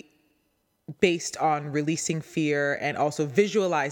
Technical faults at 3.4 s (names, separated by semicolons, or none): none